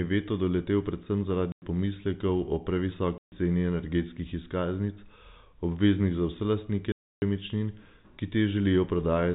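Around 1.52 s, right after "veto doletel predvsem", the speech drops out for 100 ms before "pomislekov o", then again for 140 ms at 3.18 s and 300 ms at 6.92 s. That's packet loss filled with silence, with hard-edged holes whose lengths fit 20 ms packets, over narrowband G.711 telephone audio.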